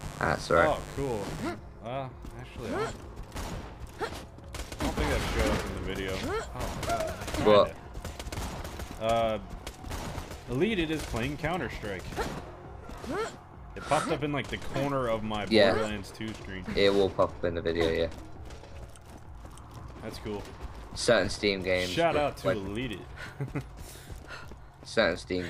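Sharp switching spikes from the 50 Hz mains supply leak into the signal path from 0.0 to 1.5 s, twice per cycle, causing mains buzz. Their harmonics stack up into the kilohertz range, giving a steady, raspy buzz roughly 15 dB below the main sound.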